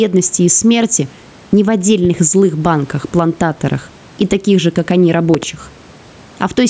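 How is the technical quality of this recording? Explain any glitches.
The recording is affected by gain pumping throughout the speech. Throughout, the gain swings by around 10 dB, likely from excessive input gain driving a fast limiter, so loud and soft parts end up closer in level and the sound is squashed. The faint room noise sits about 38 dB below the speech, and the call microphone processing leaves nothing above 8 kHz.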